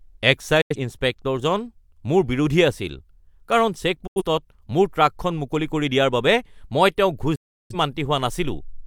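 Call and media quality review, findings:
Digital broadcast dropout at 0.61–0.76 s, 4.07–4.22 s and 7.35–7.75 s. Receiver muting on failed frames. The speech fades out within about 8 ms, holes of roughly 85 ms twice, then 341 ms. The content is lost, consistent with two then eight corrupt frames.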